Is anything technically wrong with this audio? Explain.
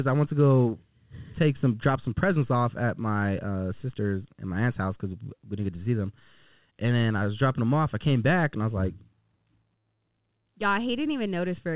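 No, nothing stood out on listening to this speech, which comes through a call path with G.711 A-law coding that leaves nothing above 4 kHz.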